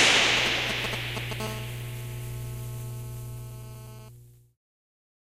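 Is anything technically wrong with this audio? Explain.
Yes. Two kinds of GSM phone interference are present.

From 0.37 to 1.41 s there are GSM signalling bursts. A nearby 2G phone is sending short groups of radio bursts, as it does before a call connects. The audio circuit rectifies these pulses and turns them into sound. The result is a galloping dit-dit-dit of brief 217 Hz buzzes. They are roughly as loud as the wanted sound itself.

From 1.41 to 4.09 s the pattern becomes a steady GSM phone buzz. The phone is now in a call and transmits continuously in bursts 217 times a second. The circuit rectifies each burst, so the burst rate becomes an audible tone. It is a hard, raspy buzz at 217 Hz, rich in harmonics and unrelated to the audio. It sits about 17 dB below the signal.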